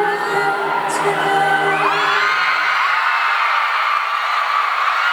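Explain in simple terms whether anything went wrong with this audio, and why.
Something did go wrong: there's an unreliable data bit running through the whole clip. One wire carrying the digital audio is flaky, so that bit randomly flips, and each flip makes a tiny identical spike. Together they form a steady fizzy crackle you can hear even in the quiet gaps.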